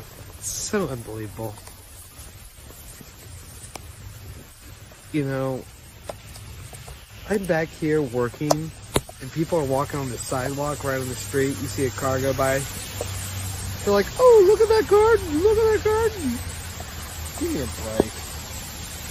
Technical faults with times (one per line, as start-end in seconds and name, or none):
none